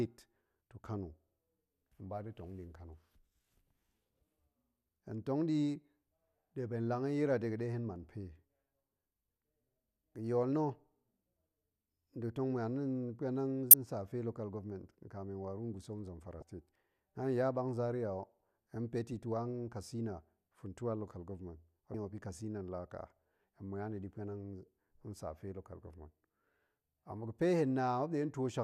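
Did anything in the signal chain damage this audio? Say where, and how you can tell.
Yes. Damaged data in a compressed stream at the codec/storage stage: brief glitches of about 30 ms at 13.71–13.74, 16.39–16.42 and 21.91–21.94 s in the speech. Corrupted bytes made the decoder misread those frames, lose sync and search for the next valid header.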